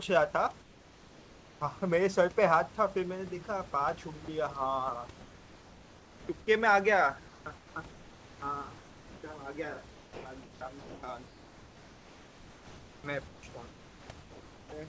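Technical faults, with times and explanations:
0.62–1.61 s, 5.21–6.29 s, 7.28–7.76 s, 8.78–9.23 s, 9.95–13.43 s and 13.70–14.72 s, comfort noise in place of the background: in each pause the real room background gives way to a smooth, featureless hiss, about 2 to 4 dB quieter where the change is clearest. The sender likely stopped transmitting while no speech was detected, so the receiver filled the gaps with synthetic noise that matches only the rough spectrum of the background and loses its texture.
4.25–4.28 s and 10.79–11.03 s, sound dropped by the voice detector: speech briefly vanishes, replaced by comfort noise. The first gap is about 30 ms long. In the second, about 90 ms of speech is lost within a 240 ms stretch of filled noise. The voice detector likely judged the speech to be background and stopped sending, so comfort noise played instead until it triggered again and the speech returned.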